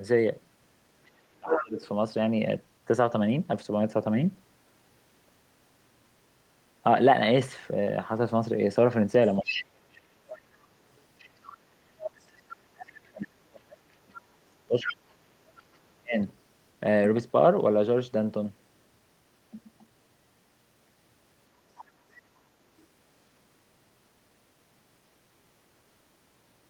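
From 1.04 to 1.88 s the other side's voice leaks through, about 5 dB below the talker. This is likely residual loudspeaker echo that the canceller missed. On a spectrogram it appears as a second, misaligned harmonic stack. Within that span, from 1.29 to 1.77 s, speech is suppressed in double talk, dropping by as much as about 30 dB. The likely cause is the canceller turning both voices down at once. The leak returns at 9.27–9.97, 11.19–12.26 and 14.89–16.35 s, about 10 to 15 dB down. Across 9.38–16.19 s, the talker is cut again, by up to about 40 dB, for around five seconds in total. A faint blip of leakage appears near 21.8 s.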